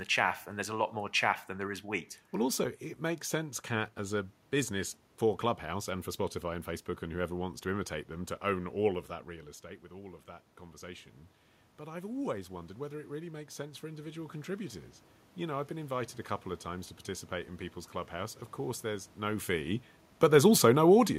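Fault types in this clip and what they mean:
Automatic gain rising: input falls about 12 dB, then gain climbs about 9 dB over ten seconds; waveform envelope and spectrogram noise floor brighten together.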